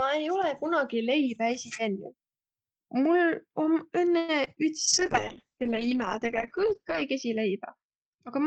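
At 4.17 to 4.31 s a call audio freeze stretches the last sound into a fading buzz for about 110 ms, likely a jitter buffer running dry. The spectrogram shows a smeared horizontal band, and no audio is lost.

Two short concealed packet losses follow, at 4.45 to 4.48 s and 4.54 to 4.58 s. Each replaces about 20 ms with synthesized continuation, heard as brief wobbles and seen as blurred slivers in the waveform.

From 4.88 s to the end, a call bitrate drop from 32 to 8 kbps makes the speech muffled and watery. On the spectrogram, energy above 8 kHz vanishes.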